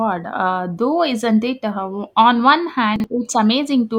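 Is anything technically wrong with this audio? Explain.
Yes. At 2.96 to 3.04 s the speech has chunks out of order: a 40 ms chunk arrived or was written one chunk late, so it plays after the chunk that should follow it. Nothing is dropped, but the order is swapped and three hard joins appear, heard as a brief jumbled stutter. That separates it from a dropout or skip, where sound is missing, and from a repeat, where material plays twice.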